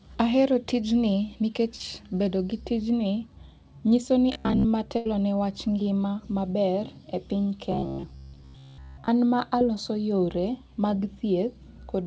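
A speech clip carried over a G.722 call path, with nothing above 8 kHz, shows three kinds of fault. Short concealed packet loss occurs twice. At 1.76 to 1.81 s, between "tijni nikech" and "bedo gi tijni", about 40 ms of audio failed to arrive, and the receiver bridged 36 ms by extending the preceding sound before blending back, leaving a brief smear. At 9.59 to 9.62 s, just before "yore mag", a 20 ms gap was covered by a 12 ms fill. Robotic sound from repeated short buffers appears at 4.33 to 4.66 s and again at 7.72 to 9.08 s. Most of the audio in these spans is a repetition of the last short chunk, imposing a rigid metallic buzz at 66.9 Hz that loosely tracks the speech underneath. The cause is likely starved playback, with the software looping a stretch about 15 ms long, which fits a buffer of that length, while the real audio is skipped. A burst of packet loss at 4.97 to 5.07 s removes about 80 ms just before "ne wach ngima maber". 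The receiver stretched the last sound over 77 ms, fading it out, and then resumed further on with the intervening speech gone.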